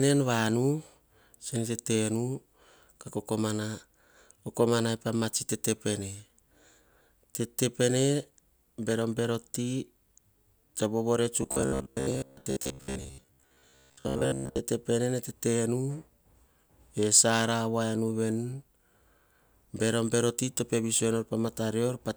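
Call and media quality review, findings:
Robotic sound from repeated short buffers, 11.43–14.60 s, right after "to vovore". Speech collapses into a rigid metallic buzz near 66.8 Hz, still loosely tracking the syllables. Likely playout buffer underrun: the same roughly 15 ms block is replayed for most of the stretch while incoming audio is dropped.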